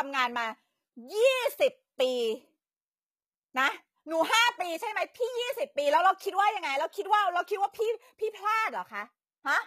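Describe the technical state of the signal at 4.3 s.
At 4.3 s you're hearing the same thing that runs through the whole clip: the treble sounds synthetic, with s sounds coming out gritty and lispy. That's likely HE-AAC compression at a low rate, consistent with roughly 20 kbps, where the top end is rebuilt by copying lower bands upward.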